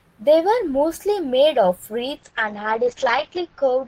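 At 2.16 s a call bitrate drop sets in and lasts to the end at about 3.9 s. The connection's bandwidth estimate fell, so the encoder was forced to spend far fewer bits, consistent with a fall from about 32 kbps to about 9 kbps. With so little to work with, it coded the speech coarsely and cut the audio bandwidth from 20 kHz to 8 kHz. The speech turns muffled and rough, with a watery texture, and stays at its worst for 1.27 s.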